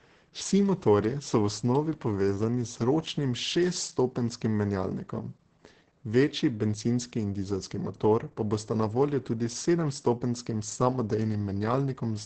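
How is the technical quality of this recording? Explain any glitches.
Technical quality is poor, limited by heavy low-bitrate codec damage across the whole recording. Opus voice compression, throughout: the SILK coder's coarse excitation makes speech hoarse and slightly robotic, with nothing above 8.8 kHz, consistent with roughly 10 kbps wideband coding.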